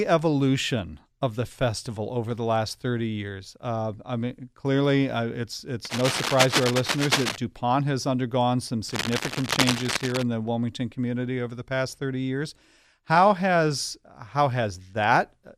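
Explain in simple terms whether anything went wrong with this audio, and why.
Yes, there's cable scratch noise in two spots. Right after "mean clearly uh it's" a rough scratchy rustle runs from 5.85 to 7.36 s, about as loud as the speech, and after "has undergone some" it returns, a bit quieter, from 8.89 to 10.23 s. It's likely a worn cable or connector being jostled, with the flickering contact spitting bursts of noise.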